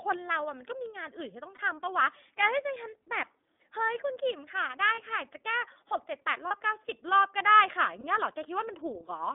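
From start to finish the speech runs through the iLBC codec. It's narrowband, roughly 250 Hz to 3.6 kHz with nothing on top, and plainly rough and a bit synthetic, which fits the 30 ms, 13.33 kbps mode, where each frame's excitation is coded independently.

Then there are lost iLBC frames at 1.55, 4.94, 6.48 and 8.01 s, each about 30 ms, consistent with a single dropped frame. The decoder fills each gap by repeating the last pitch cycle with some noise, so you get a brief buzzy held vowel before the speech snaps straight back.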